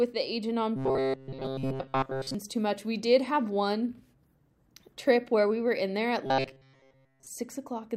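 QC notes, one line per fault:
0.76–2.35 s, robotic sound from repeated short buffers: right after "the agent on", most of the audio turns into a rigid metallic buzz at 133 Hz, up to "too much". Likely cause is audio arriving too slowly, so chunks of about 7.5 ms get repeated while real audio is skipped.
6.26–7.27 s, robotic sound from repeated short buffers: after "were in there at", pretty much the whole stretch becomes that same 133 Hz buzz, loosely following the original. Likely the same starved-buffer looping of roughly 7.5 ms chunks replacing the real audio.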